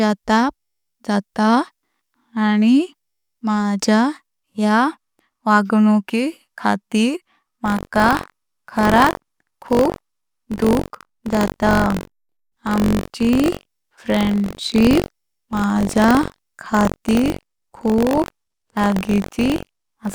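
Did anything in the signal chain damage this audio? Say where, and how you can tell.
Yes: buffer tearing from 7.64 s to the end, just after "वांग्णुकी खातीर". A steady 46.9 Hz rattle on the speech, fitting a 1024-sample driver buffer, comes from each buffer splicing in a small slice of audio from roughly 70 ms earlier.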